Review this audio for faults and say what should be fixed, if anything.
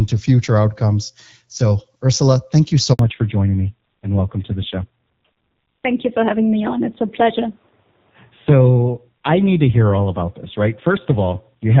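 Right after "thank you so", the speech drops out abruptly and stays silent from 2.93 to 2.99 s, a 60 ms hole. This is a handover gap: the call was moved between networks and no speech frames arrived during the switch, so that sound is simply lost. Preventing it means making the handover seamless, keeping the old link carrying frames until the new one is ready.

From 2.99 s to the end, the speech turns duller and rougher, with nothing above 4 kHz. This is a fallback to narrowband: after the handover the call left HD Voice, whose lighter wideband coding is heard before the switch, for a basic narrowband codec, and the roughness points to a low rate of around 5.9 kbit/s. Preventing it means ensuring the target network supports AMR-WB, so the call can stay in HD Voice after switching.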